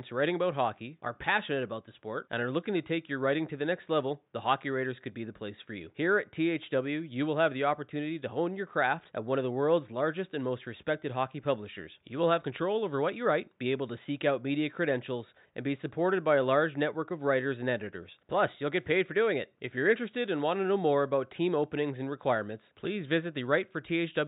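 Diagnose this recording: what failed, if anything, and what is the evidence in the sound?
Nothing failed in this recording; the only sound beneath the speech is faint room noise, about 49 dB below it.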